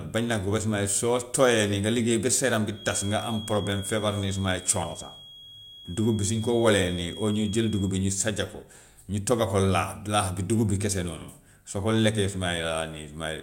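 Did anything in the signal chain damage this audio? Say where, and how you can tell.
Yes. From 2.69 s to 7.98 s a thin, steady whistle at about 3.3 kHz sits behind the speech, roughly 20 dB below it, swelling and fading slowly in level before it stops. This is a feedback whistle, likely from the acoustic loop between the playback loudspeaker and the microphone running just at its stability limit: one frequency gets enough loop gain to keep ringing without building into a runaway howl.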